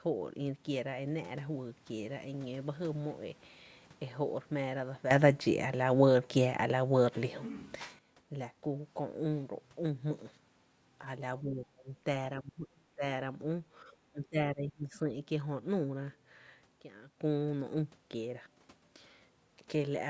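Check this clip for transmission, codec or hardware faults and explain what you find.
Two kinds of fault affect this speech clip: abrupt level steps and brief suppressions of the talker.

Sudden gain jump: from 5.11 to 7.99 s the speech and background noise leap about 12 dB louder together, and from 16.81 to 17.18 s they drop about 14 dB. Likely a digital gain change applied without a ramp.

Speech suppressed in double talk: at 11.42 to 11.91, 12.42 to 13.03, 13.84 to 14.37 and 14.54 to 14.95 s the voice dips sharply, by roughly 20 to 30 dB. This is likely an echo canceller that mistook the talker for loudspeaker echo and turned both down. The call's microphone processing, which leaves nothing above 8 kHz, is normal.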